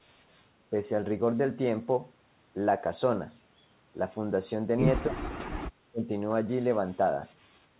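Speech, band-limited with nothing above 4 kHz, dips sharply by about 25 dB at 5.08–5.19 s and 5.89–6.08 s, likely speech suppressed in double talk by an echo canceller turning down the talker along with the loudspeaker echo.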